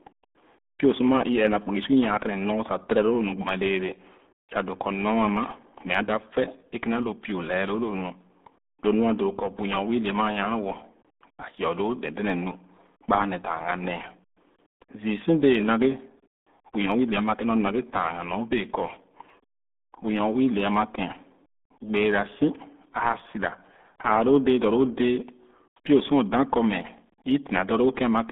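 The whole clip carries the RealAudio 14.4 codec sound. Nothing above 3.8 kHz survives, leaving muffled, gargly speech that fits an 8 kbit/s dial-up codec. From 0.17 s to 28.25 s there are clock slip clicks, a soft rattle of ticks roughly every 70 ms, likely from two unsynced clocks drifting around 300 ppm apart.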